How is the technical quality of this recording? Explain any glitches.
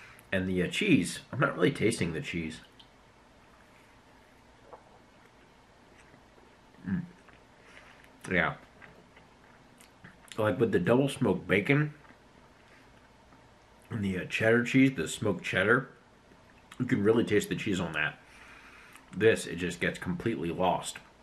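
Nothing in the recording stood out as a technical problem on listening, so there are no glitches to explain.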